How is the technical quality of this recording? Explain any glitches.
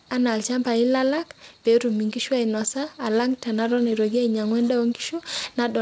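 No glitches or faults heard.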